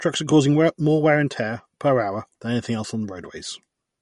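Speech, likely passed through MP3 compression at a low bitrate near 48 kbps throughout: treble is cut off above 11.2 kHz, and weak detail swirls audibly.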